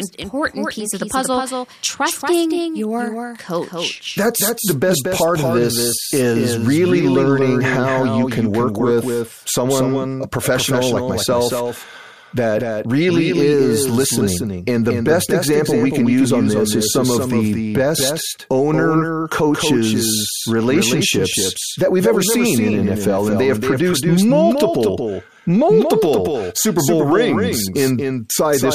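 A slower second path likely captures the speech again, so throughout, a doubled audio track trails roughly 200 ms behind, a few dB quieter.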